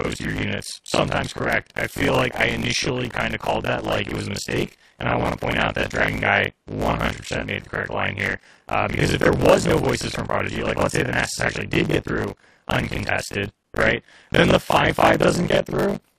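Throughout, buffer tearing lets the reader overtake the writer each period, so much of every buffer replays older audio, a constant 50 Hz rattle that follows the signal. Gaps between stream segments at 1.61, 7.61 and 13.63 s, six seconds apart, insert hard-edged silences of 4.4, 7.9 and 11 ms, with nothing lost or repeated.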